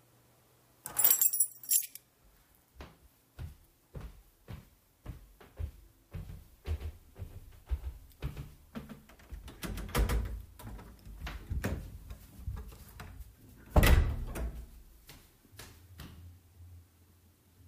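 A recording of everyday sounds, with a doubled audio track from 6.29 s to 10.47 s: a second full-band copy trails the original by roughly 150 ms at around 5 dB lower, most likely from a slower second capture path or an edit holding two out-of-step copies. On a spectrogram every event appears twice, an identical fainter twin offset in time with no decay or smearing. In the waveform that echo switches on and off abruptly at both boundaries.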